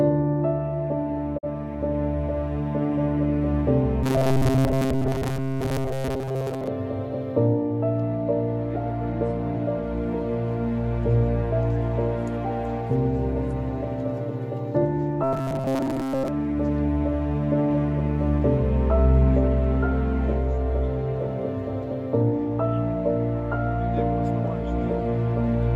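A digital broadcast dropout at 1.37 to 1.45 s, fitting one lost frame, makes the receiver fade out over about 20 ms and mute, so roughly 43 ms of audio vanishes. The audio turns into a rigid, metallic 133 Hz buzz from 4.03 to 6.67 s and from 15.24 to 16.29 s, with most of it replaced by repeats, likely robotic sound from repeated short buffers of about 7.5 ms each.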